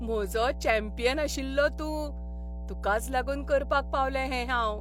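Power-line interference, either from a ground loop or from a nearby transformer, couples into the signal path for the whole clip. The result is mains hum: a steady low tone at 60 Hz under the speech from start to finish, sitting only about 10 dB below it.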